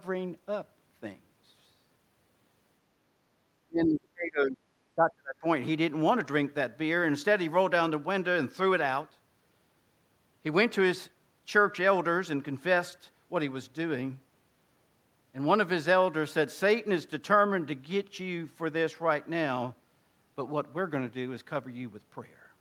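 At 3.59 s the speech sinks sharply, at its deepest by something like 35 dB, and stays down until 4.61 s. It happens again from 4.95 s to 5.44 s. That's speech suppressed in double talk, most likely. The far end was coming out of the loudspeaker while this talker spoke, so the echo canceller couldn't separate the live voice from its own echo and turned the whole lot down, about a second the first time and under half a second the second.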